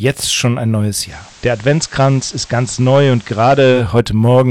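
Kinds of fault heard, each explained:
Hard clipping: Throughout, the sound is driven about 5 dB past what the stage can pass, so a small share of peaks are sliced flat. The waveform shows squared-off tops, and the spectrogram shows bright vertical streaks of harmonics reaching high up, heard as crackle on loud moments.
Digital radio blending to analogue: From 0.99 to 3.85 s the receiver lost the digital stream and cross-faded, over about 150 ms, to the FM broadcast of the same station, then back. The spectrogram shows a hiss floor roughly 30 dB down, and level drops about 1 dB.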